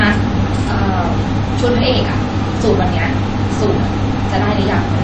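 From start to finish the speech has a watery, swirly quality, with plainly audible damage: s sounds come out metallic, and the fine detail flutters as weak components drop in and out between frames. This is likely MP3 compression, with the encoder short of bits and the damage pointing to a low bitrate around 32 kbps. It discards quieter frequency content it judges unimportant.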